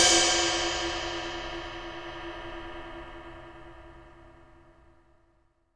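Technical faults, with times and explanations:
No dropouts, clipping, glitches or other technical faults can be heard anywhere in the recording.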